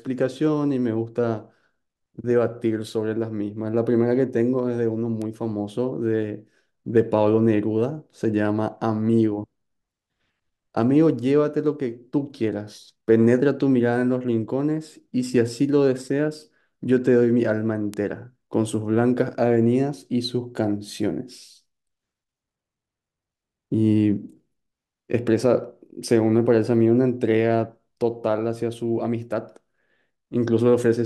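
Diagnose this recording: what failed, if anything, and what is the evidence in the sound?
Bit error spikes in storage or on a digital link: single-sample ticks at 5.22 s and 17.94 s, peaking near -14 and -8 dBFS. Flipped bits jump the value, then it returns.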